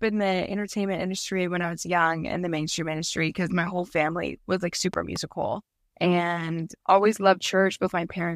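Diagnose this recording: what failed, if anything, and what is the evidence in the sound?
A voltage spike, likely from the analogue wiring, adds a loud pop: two hits from 4.94 to 5.18 s, after "whole family was like", about 10 dB above the speech.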